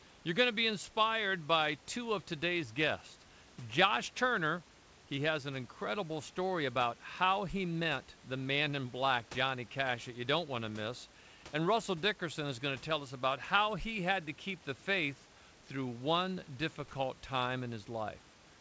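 Nothing here goes wrong: the room's background noise sits about 24 dB under the speech, and the call codec simply leaves nothing above 8 kHz, as that kind of call path would.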